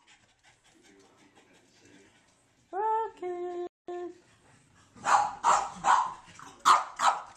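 At 3.67 s the audio stops dead in mid-flow. This is a playback stall. The output stays silent for about 0.21 s, until 3.88 s. The player most likely ran out of buffered data, or its audio thread was briefly blocked. Nothing plays while it waits. The sound then picks up again.

From 3.88 s to 4.72 s comes time-compressed catch-up. The player works off the backlog left by the stall. It removes small slices of audio and cross-fades across the joins. The result runs about 1.25 times faster than normal. Pitch stays where it was, so the audio sounds hurried, not higher.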